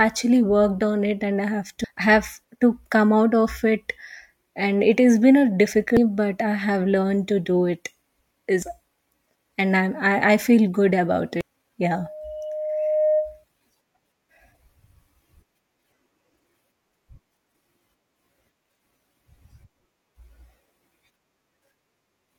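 Damaged data in the compressed stream makes the decoder lose sync on this speech recording, producing brief glitches at 1.84, 5.97, 8.62 and 11.41 s. From 11.97 to 13.44 s the microphone picks up its own loudspeaker, causing a loudspeaker feedback squeal: a 613 Hz tone swells over roughly a second until it is about as loud as the speech.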